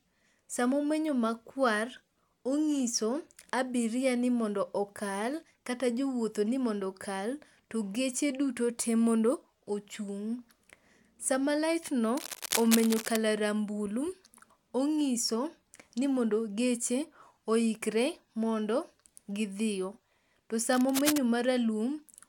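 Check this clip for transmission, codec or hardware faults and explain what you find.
Two bursts of scratchy, rustling noise ride over the speech at nearly the level of the voice, from 12.17 to 13.16 s, ending just before "rambulu ong'iso ni mondo", and again from 20.73 to 21.18 s. This is cable scratch noise, likely from a worn cable or connector whose contact resistance fluctuated as it moved.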